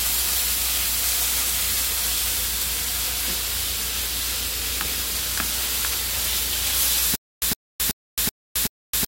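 At 1.91 to 1.94 s a sharp snap cuts over the sound, an electrical switching spike, likely a nearby switch or discharge arcing into the audio line. From 7.16 s to the end there is a stutter with silent gaps: a 112 ms burst repeats five times, each followed by 266 ms of dead digital silence, so it returns every 378 ms. The stream likely stalled and replayed its last fragment at each retry, and the audio meant for those gaps is lost.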